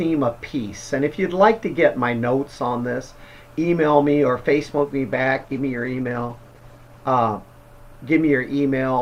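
A call bitrate drop begins at 5.13 s and lasts until the clip ends. The connection's bandwidth estimate fell, so the encoder had far fewer bits to spend. The sound points to a fall from around 96 kbps to about 14 kbps, with the lowest rate holding for about 1.65 s. At that rate the codec quantises coarsely and removes the upper frequencies, so the audio turns rough, watery or muffled. It does not recover before the clip ends.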